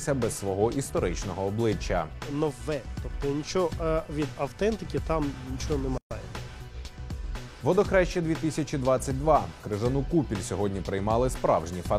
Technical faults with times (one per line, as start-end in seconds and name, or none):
5.98-6.11 gap at a join of encoded pieces